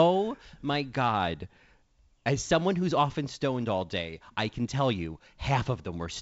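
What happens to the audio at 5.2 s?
Nothing goes wrong at 5.2 s: the speech carries straight through that moment intact, with the wideband G.722 telephone coding at 56 kbit/s heard as usual, its band ending a little below 8 kHz.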